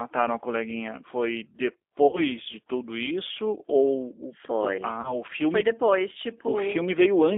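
Throughout, plainly audible G.729 codec damage makes the speech rough and synthetic. It points to an 8 kbit/s stream. The band runs from 300 Hz to 3.6 kHz.

At 2.07 s and 5.01 s, VoIP packet loss is concealed by the speech codec. The first gap is 60 ms, the second 30 ms. The decoder stretches the last sound into a fading buzzy tone or coloured noise. The speech stays weak until 2.24 s and 5.16 s.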